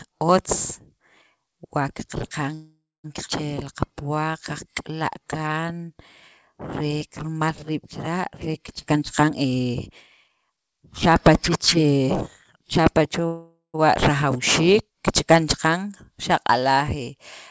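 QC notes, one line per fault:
2.54–3.06 s and 13.26–13.76 s, call audio freeze: the sound stalls for about half a second each time, a fading buzz then 210 ms and 110 ms of silence, likely packets held up and the jitter buffer running dry. Nothing's lost, it just resumes late.
3.26–3.29 s, skip ahead: playback jumps forward with barely any gap, roughly 300 ms of audio dropped and the two sides butted together.
3.63–5.95 s and 6.53–7.39 s, jitter buffer slow-down: the sound runs slower at unchanged pitch, 91% and 92% speed, 222 ms and 78 ms added by repeating pitch periods. The second stretch ends just before "riib' chila'".
8.92–12.08 s and 12.56–13.19 s, jitter buffer speed-up: things get hurried at the same pitch, 113% then 109% speed, with roughly 400 ms and 70 ms trimmed out as the buffer cut its excess delay.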